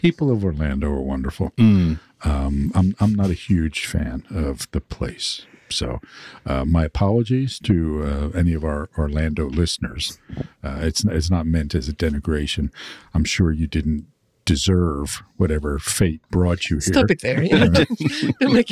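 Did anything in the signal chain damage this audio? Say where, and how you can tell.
No, nothing in the signal chain damaged this audio.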